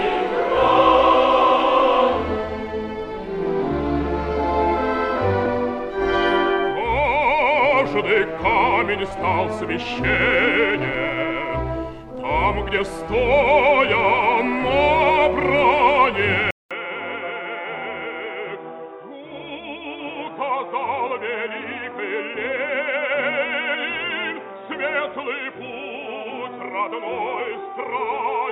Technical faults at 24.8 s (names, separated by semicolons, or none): input switched to a poorer device